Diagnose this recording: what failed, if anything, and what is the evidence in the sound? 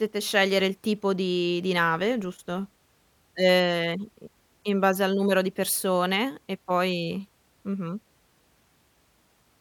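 Nothing in the chain seems to have failed here, since the speech comes through without any break, glitch or distortion that would point to a problem at any stage.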